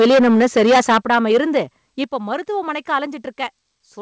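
From the start to 1.58 s, microphone overload: the input gain was likely set so high that the signal drove past the converter's ceiling by about 14 dB, so roughly a fifth of the samples are flattened at the converter's limit. The squared-off peaks give the loudest syllables a harsh, crackling, buzzy edge, and the distortion continues until just before "இப்போ மருத்துவமனைக்கு".

At 1.02 s the microphone volume is stepped down, likely because the call software reacted to that clipping by cutting the device's input gain in one move of about 7 dB. The distortion keeps going past this point. At 2.04 s, just before "இப்போ மருத்துவமனைக்கு", a second step of about 7 dB follows. Each time the voice and the room behind it drop together in one sudden jump, not a gradual fade, and over the two steps the level ends up about 14 dB lower. The G.722 call path stops everything above 8 kHz, so both faults are heard within that band.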